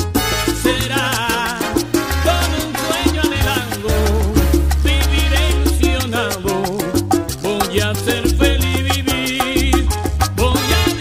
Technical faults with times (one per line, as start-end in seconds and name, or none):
none